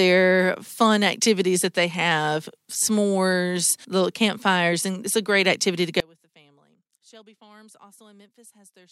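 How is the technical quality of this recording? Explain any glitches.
There's one real problem, and it takes over the last few seconds of the speech. From about 6.00 s, right after "a great activity to", through to the end, the level drops by about 30 dB when the audio is heard in mono. That pattern points to one channel inverted: one side likely has its polarity flipped, so everything the two channels share cancels in the sum. The centred speech nearly disappears, leaving only a faint residue of whatever differed between the sides.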